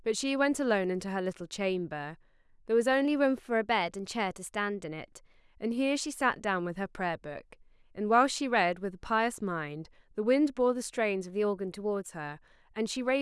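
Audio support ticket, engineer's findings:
Speech runs 5.7% fast, pitch up 97 cents, 3.05–5.36 s and 11.30–12.08 s, then snaps back. Likely drift correction step in clock-matching resampler. Speed and pitch shift together, unlike pitch-only faults.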